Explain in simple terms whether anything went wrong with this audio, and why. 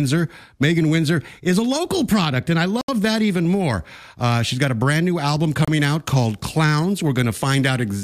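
Two short dropouts in this speech point to a likely Bluetooth stall: radio interference held up the wireless packets, so the headphones used up their small store of audio and paused until the delayed packets arrived. The sound cuts to silence for about 73 milliseconds from 2.81 s, right after "local product and I", and for about 29 milliseconds at 5.65 s, after "a brand new album". Each time it then carries on.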